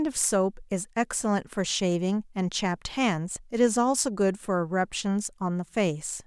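A recording of speech with nothing technically wrong with it.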